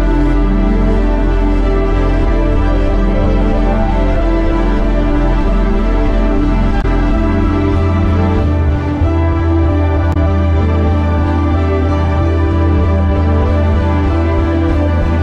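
At 6.78 s and again at 10.10 s, damaged data in the compressed stream breaks the audio for about 70 ms each time. The decoder hits frames it cannot read correctly, loses sync and resumes only at the next valid frame header, producing a brief glitch. On a spectrogram each event shows as a narrow vertical disruption. The waveform shows an abrupt, jagged discontinuity where the sound resumes.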